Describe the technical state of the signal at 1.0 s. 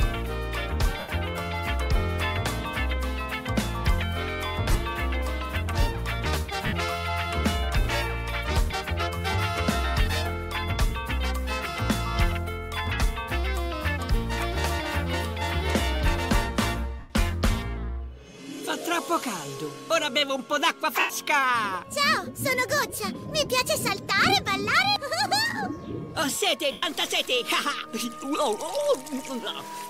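At 1.0 s the signal falls within lost LE Audio frames, spanning 0.99 to 1.09 s (90 ms, consistent with twelve 7.5 ms frames). The LC3 decoder fills the gap by repeating the last spectrum with randomised signs, then fading it after the first few frames. Tonal content turns into a noisy smear. On a spectrogram, harmonic lines blur into diffuse broadband texture that tapers in energy. On the waveform, the envelope shrinks across the gap.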